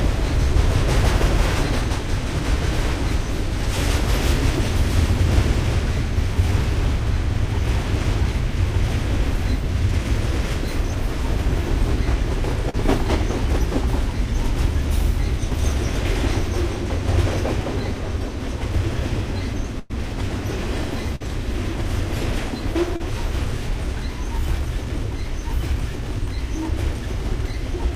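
At 12.69 s and again at 23.0 s there is a short concealed packet loss: about 40 ms of audio arrived too late, and the receiver bridged each hole by extending the preceding sound before blending back. It comes across as a brief smear or wobble.

At 19.79 s and 21.16 s there is a burst of packet loss. Here 100 ms and 40 ms went missing, and the filled-in continuation fades as it runs. The first is a held, dying tail; the second is a shorter fade. Unlike the short repairs, the audio picks up further along, with the lost stretch gone.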